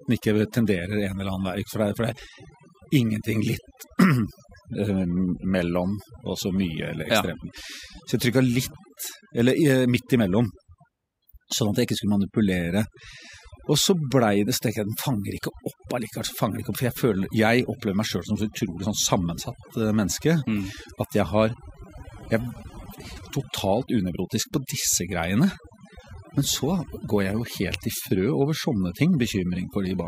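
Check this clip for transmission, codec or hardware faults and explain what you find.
The one problem here is a processing fault, not a transmission, codec or hardware one: overdone noise removal, running through the whole speech clip. A noise reducer was pushed too hard on a noisy recording, so any frequency band sitting near its noise estimate gets pulled way down or shut off, and the quieter parts of the speech get caught along with the noise. What's left is a lowered background full of little twinkling specks.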